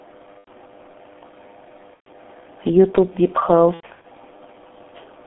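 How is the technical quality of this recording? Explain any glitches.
The speech is muffled and hoarse throughout, with smeared consonants and nothing above about 3.4 kHz or below 200 Hz. That points to the G.723.1 codec at roughly 6 kbit/s: its 30 ms frames and slow-updating voice model cannot keep up with fast changes in speech.

There are three short dropouts from VoIP packet loss concealed by the speech codec. At 0.38–0.48 s and 1.94–2.09 s the speech is stretched into a fading sound. From 3.74 to 4.06 s, broken patches recur over about 0.3 s. The decoder extends its last pitch and filter at falling gain, and the gaps fit runs of 30 ms frames, the longest in that last stretch about 90 ms.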